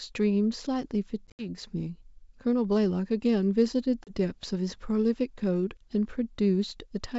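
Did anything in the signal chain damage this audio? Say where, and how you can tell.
Yes: packet loss on an ADPCM call at the network stage, 1.28–1.46 s and 4.04–4.12 s. Hard silent holes end in slightly distorted speech while the G.722 decoder's predictor resynchronises.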